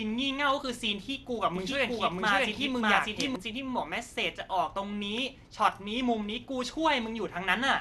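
A speech clip with MP2 compression heard throughout. It sounds dull and gurgling, nothing above 12.2 kHz, which fits a low-rate encode near 80 kbps. From 1.56 to 3.36 s there is a doubled audio track: a second copy at roughly equal level trails by about 0.7 s, likely from a slower second capture path.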